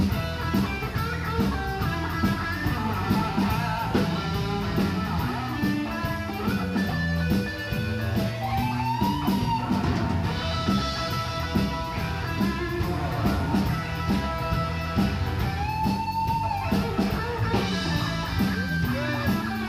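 A thin DECT cordless phone buzz runs right through, about 30 dB down: a nearby DECT unit's 100 Hz radio bursts getting rectified into the audio path.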